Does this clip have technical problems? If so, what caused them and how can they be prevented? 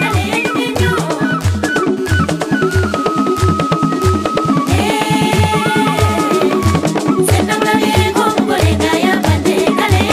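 Yes. From 1.97 s to 4.69 s a GSM phone buzz sits about 24 dB below the signal: a hard, raspy, harmonic-rich tone at 217 Hz, nearly steady, as from a nearby 2G handset in a call whose transmit bursts were rectified by the audio circuitry. Keeping phones away from the equipment or switched to flight mode, and using shielded, well-grounded cabling, prevents it.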